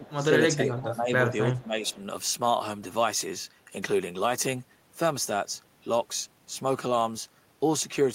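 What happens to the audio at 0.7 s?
Speech suppressed in double talk runs from 0.5 to 1.13 s. The speech dips by roughly 15 dB at its deepest. The likely cause is an echo canceller that mistook the talker for loudspeaker echo while both sides spoke, and turned the speech down.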